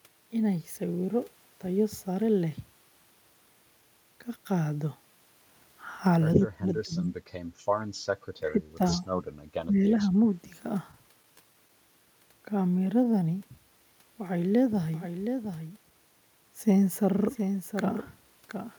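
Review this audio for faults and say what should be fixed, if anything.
Speech suppressed in double talk at 6.34–7.13 s, 8.40–8.80 s and 9.68–10.15 s: the voice dips by up to about 20 dB, likely because the echo canceller turned it down while the far end also spoke. Tuning the echo canceller's double-talk detection and limiting its suppression depth would prevent this.

Scattered short gaps at 10.91–11.71 s: about four tiny holes, the longest around 15 ms, were filled by continuing the preceding sound. Better network quality or forward error correction would prevent these losses.

Jitter buffer slow-down at 12.79–13.57 s: repeated pitch periods added 63 ms, so speech runs at 93% speed without changing pitch. A steadier jitter buffer target delay would avoid this.

Jitter buffer speed-up at 15.62–15.91 s: about 50 ms of pitch periods were cut, so speech runs at 116% speed and sounds hurried. 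Smoother packet delivery and gentler buffer adaptation would prevent it.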